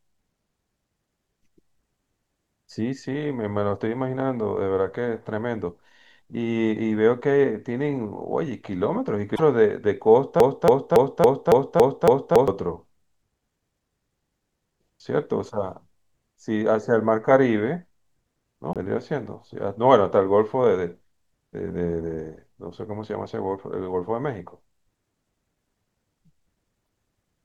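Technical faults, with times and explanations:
9.35–9.40 s, 18.73–18.77 s and 26.85 s: broken MP3 bit reservoir. Each is a brief burst of noisy chirp or a short gap in the 24 ms frames after the cut, likely where frames were dropped so the next frame read borrowed bytes belonging to another. On the waveform, each shows as a sudden discontinuity.
10.40–12.48 s: broken-record loop. A 279 ms fragment of the speech plays seven times back to back, likely because the decoder or stream stalled and kept resending the last buffer it held. The speech that should have filled those two seconds is lost. The waveform shows identical repeating blocks, and the spectrogram shows the same pattern tiled at regular intervals.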